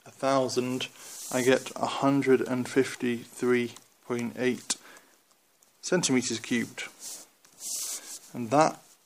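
No technical faults can be heard anywhere in this recording.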